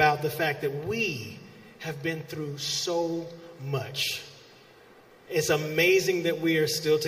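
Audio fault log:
No fault is heard in the audio.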